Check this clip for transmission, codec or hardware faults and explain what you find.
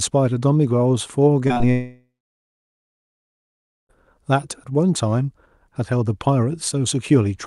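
The clip has three short packet-loss glitches followed by a long gap in the audio.

Short concealed packet loss at 1.47, 1.54 and 1.58 s: each time about 20 ms went missing and the receiver extended the preceding sound, leaving brief smears rather than silence.

Long network dropout from 1.72 to 3.91 s: the likely cause is no packets arriving for over two seconds. The concealment buzz fades, leaving about 1.8 s of silence, unlike the brief smears.

The call path's coding sound and top end near 12 kHz fit an Opus stream at about 48 kbps.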